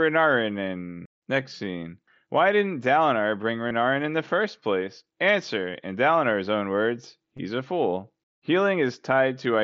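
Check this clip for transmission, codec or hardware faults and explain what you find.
There are two brief dropouts of concealed Bluetooth headset packet loss. The first runs from 3.69 to 3.71 s, just before "in the first place". The second comes at 7.37 s, between "own words" and "a fool". In each case voice packets between the headset and the phone went missing over the radio link. The receiver filled the gap by repeating the best-matching recent stretch of waveform. About 22 ms of loss at the first spot fits roughly three frames, and about 15 ms at the second fits two. The gaps are short, but each is a run of lost frames rather than a single loss. You hear a buzzy tone held at full level and a tiny warble as the real audio picks up again. The wideband mSBC link carrying the call is working as it should, with its usual light grain on louder sounds.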